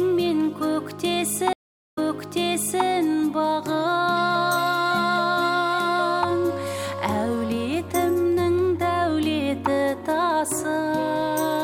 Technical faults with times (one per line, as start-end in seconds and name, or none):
1.53-2.86 stream reconnect